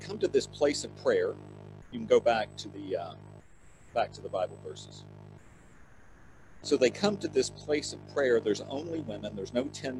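Nothing stood out as a fault on listening.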